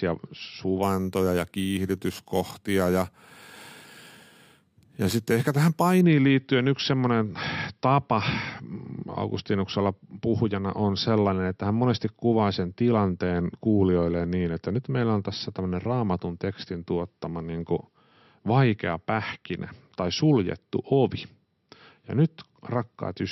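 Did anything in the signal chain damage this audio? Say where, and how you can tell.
Yes: imaging from sample-and-hold upsampling at the sample-rate conversion stage, 0.83 to 6.01 s. The 12 kHz audio was raised to 48 kHz by repeating samples without a smoothing filter, so mirrored spectrum copies fill 6 to 12 kHz about 20 dB down, heard as metallic fizz tracking the speech.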